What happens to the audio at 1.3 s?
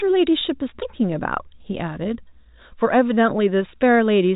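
Nothing goes wrong at 1.3 s; the speech there is intact, carried through G.711 telephone coding with its usual ceiling near 3.8 kHz and at most faint damage beyond that band limit.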